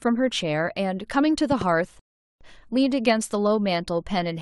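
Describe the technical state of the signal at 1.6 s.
A loud pop runs from 1.52 to 1.64 s, heard as two sharp pops in quick succession peaking roughly 10 dB above the speech. The likely cause is a sudden voltage pulse, from a plug, switch or static discharge, added to the signal while the speech continues underneath.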